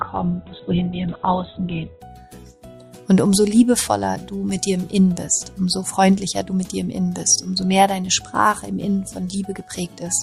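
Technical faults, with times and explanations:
0.0 to 2.0 s, adaptive stream starting at a low bitrate. Nothing is heard above 4.1 kHz, and codec artefacts are strong. This fits a very low-bitrate version, roughly 8 kbit/s. At 2.0 s the player steps up to a better version, near 64 kbit/s, and the treble returns without any gap.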